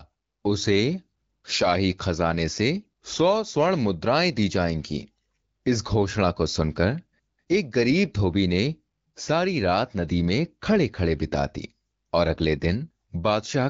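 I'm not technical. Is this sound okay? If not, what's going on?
Yes, nothing is wrong with this recording. It has the sound of an HD Voice phone call, which carries speech clearly but leaves out the very highest treble, as that kind of call normally does.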